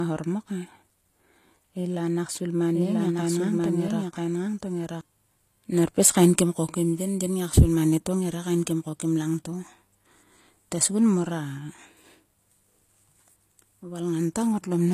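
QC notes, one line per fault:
Throughout: low-bitrate audio saved at a high bitrate. Nothing is heard above 14.9 kHz. This is likely an earlier low-bitrate encode, re-saved as MP3, which cannot restore what was removed.
2.75–5.01 s: doubled audio track, right after "la nak svil ma". A full-band copy, about equally loud, trails by roughly one second. It starts and stops abruptly, likely from a second capture path.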